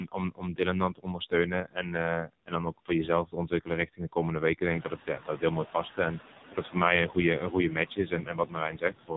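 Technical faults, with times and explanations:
Throughout: noise suppressor artifacts. The suppressor pulls down bands it judges to be steady noise, frame by frame, by about 13 dB. The background sinks in the gaps and swells back under the speech. This comes from the band gains moving constantly as the suppressor tracks what it thinks is noise.
Throughout: AMR narrowband mobile codec. The speech is coded as AMR-NB at 5.9 kbps, a low rate, and the damage is heavy. The codec samples at 8 kHz, so nothing above 4 kHz survives. It rebuilds the speech from a vocal-tract model fed by a few pulses per subframe. At this bitrate that gives a buzzy, synthetic tone. The residual background turns into a swirling warble.
0.0–2.9 s, 3.25–5.99 s, 6.49–6.75 s, 7.08–9.12 s: speech cut by the noise suppressor. In each span the suppressor mistakes parts of the speech for noise and turns them down with the background. 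Soft consonants and word endings sound swallowed or faint. The deepest drops are about 18 dB, 17 dB, 13 dB and 18 dB. The affected stretches add up to roughly a second in the first span, half a second in the second, a tenth of a second in the third and under a second in the last.
4.7–4.91 s: noise suppressor catching up. The room noise rises by about 19 dB around 4.5 s. The suppressor's noise estimate lags behind the jump. For 210 ms the noise comes through with only about 6 dB of reduction. Then it sinks as the estimate adapts to the new level. The rise is real room sound picked up by the microphone, but the delayed clamp-down is the suppressor's fault.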